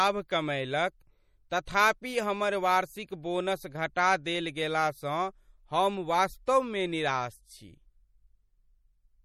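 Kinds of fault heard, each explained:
MP3 compression: plainly audible codec damage runs through the whole clip, consistent with a low MP3 bitrate around 48 kbps as the likely cause.
pre-echo: at 1.65 s, just before "हमर वार्षिक बोनस", a 19 ms hiss leaks in ahead of the attack, as block-spread quantisation noise fills that quiet moment.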